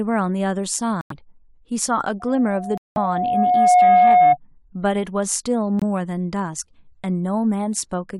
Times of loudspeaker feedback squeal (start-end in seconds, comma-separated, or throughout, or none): 2.19-4.37